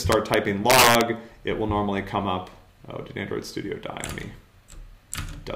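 From 0.12 to 0.34 s and again from 0.70 to 1.01 s, integer overflow wraps loud peaks to the opposite sign, driven about 2 dB then about 6 dB over. This gives violent cracks far sharper than clipping's flattened buzz.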